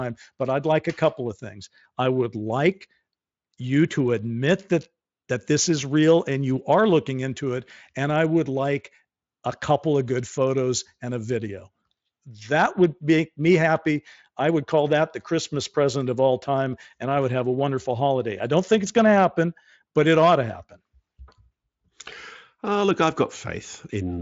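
Nothing technical to flag in this bit of speech: it sounds like it has come through Speex at a fairly generous setting, with the top end stopping at about 7.7 kHz, and nothing here calls for a closer listen.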